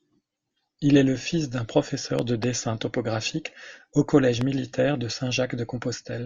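At 2.19 to 2.46 s, between "est le fils d'un" and "topographique au collège", a loud pop sounds twice in quick succession, well above the speech. At 4.41 to 4.43 s, after "topographique au collège", comes a single, louder loud pop. The speech continues underneath both. The likely cause is a brief voltage spike from a switch, plug or static discharge.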